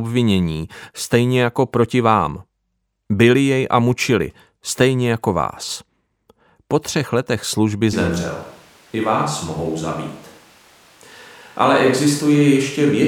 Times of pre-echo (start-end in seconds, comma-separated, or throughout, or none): none